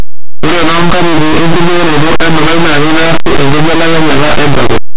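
From start to finish, linear audio read as companded: plain 8-bit samples are being expanded as mu-law codes, so small values just on one side of zero jump to extreme outputs while those on the other side stay small. The speech becomes very loud, harsh distortion, with broadband smear across the spectrogram.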